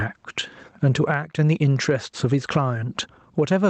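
Gain pumping runs through the whole speech clip: the gain ducks by around 15 dB under each loud syllable, likely from gain set far too high with a fast limiter clamping it. The waveform looks flattened and blocky. The call codec's band limit shows as an empty spectrogram above 8 kHz.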